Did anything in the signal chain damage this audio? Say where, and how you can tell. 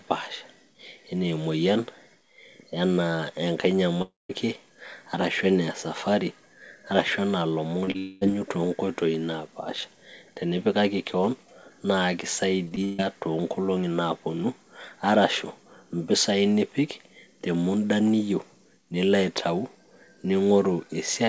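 Yes, the damage happened at the network stage. On this G.722 call path, with nothing above 8 kHz, two long network dropouts stand out. From 4.02 to 4.31 s, about 0.28 s of audio never arrives, likely from a network outage. The last sound is stretched into a fading buzz, then about 0.18 s of near silence. From 7.98 to 8.23 s, about 0.22 s is lost and filled the whole way. On a spectrogram, each shows smeared, blurred harmonics with no new onsets, and the first ends in a blank column.

Just before the second dropout there are two short concealed packet losses. At 7.85 s a 20 ms hole is patched, and from 7.91 to 7.96 s a 40 ms hole is patched. The decoder extends the preceding pitch or noise and crossfades back, so you hear a brief wobble or smear. In the waveform, the envelope flattens into a repeated cycle for a few tens of milliseconds. On a spectrogram, the harmonics stop moving briefly.

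From 12.65 to 13.00 s there is repeated packet loss, heard as robotic sound. Four separate gaps, the longest 141 ms, add up to about 0.2 s of missing audio, so roughly 55 percent of that stretch is concealment. Each patch copies the last pitch period before the next gap arrives, which gives a choppy sound. A spectrogram shows frozen, comb-like harmonic bands broken by abrupt joins, and the waveform shows looping periodic segments.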